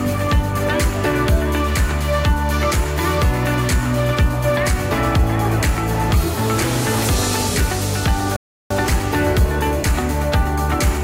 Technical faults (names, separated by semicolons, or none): rebuffering stall